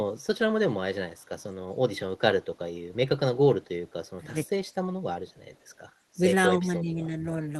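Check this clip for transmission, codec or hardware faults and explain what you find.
One fault stands out, near the end of the speech.

Speech suppressed in double talk, from 6.49 to 7.25 s: the level sinks by up to about 10 dB, with roughly 0.7 s of that stretch pulled down. This is likely an echo canceller facing both sides talking at once. Unable to tell the near talker from the loudspeaker's echo, it turned everything down together, so the speech dips. The call path itself, which sounds consistent with Opus at a moderate rate with the top end stopping around 12 kHz, is not the source.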